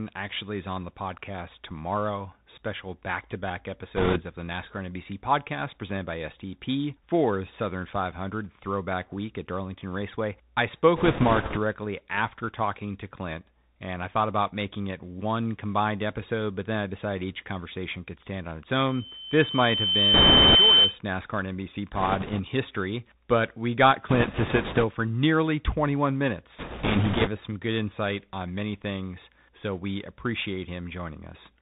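Throughout, the speech passes through a Bluetooth CVSD headset codec, consistent with a 64 kbit/s link. Nothing above 4 kHz survives, s sounds turn scratchy, and granular hiss sits underneath. This is a constant narrowband grain rather than dropouts.

Bit errors on a Bluetooth voice link come at 3.96–4.22 s (after "back to back", before "of the", heavy), 10.96–11.58 s (before "after talking to"), 20.14–20.55 s, 21.95–22.41 s (lighter), 24.09–24.85 s (between "history but we got" and "for nearly"), and 26.59–27.29 s. Flipped one-bit steps add rushing crackle, never the sharp clicks of dropped packets.

From 18.89 to 20.99 s, a loudspeaker feedback squeal at 3.1 kHz swells over about a second and a half to roughly 10 dB above the speech. Unlike steady interference, it is a single self-growing tone.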